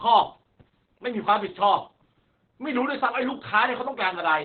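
A speech recording carrying heavy Opus voice compression from start to finish. The band stops near 4 kHz, so the voice sounds muffled and telephone-like, and the coarsely coded excitation adds a hoarse, slightly robotic buzz. This fits the SILK coder working narrowband at a very low rate, around 8 kbps. On a spectrogram the energy ends abruptly at 4 kHz with empty space above, and the harmonics look smeared and blocky rather than cleanly striped.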